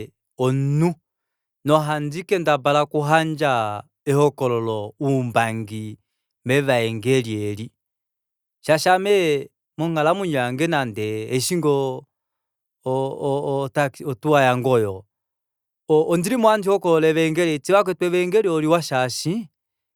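Nothing in the speech recording stood out as a technical problem on listening.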